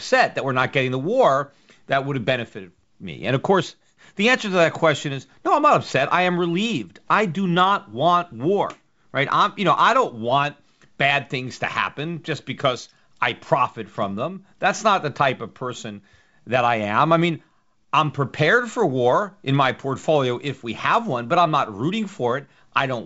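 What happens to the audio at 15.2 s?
Nothing goes wrong at 15.2 s: the speech carries straight through that moment intact, with the G.722 wideband telephone coding at 64 kbit/s passing it with its usual band limit near 7.7 kHz.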